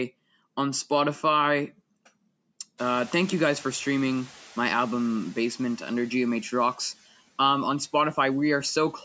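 From 2.77 to 5.27 s the noise suppressor catches up: a sudden noise rise passes with less reduction at first, then sinks about 5 dB over 2.5 s, a fading spectrogram floor.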